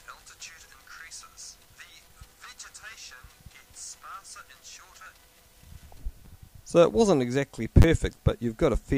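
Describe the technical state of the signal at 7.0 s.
The signal at 7.0 s is intact, with no audible fault at that moment.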